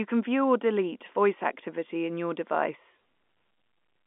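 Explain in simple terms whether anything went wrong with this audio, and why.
Nothing went wrong with this audio; it sounds like an ordinary landline phone call, with the usual narrow telephone sound and no added glitches.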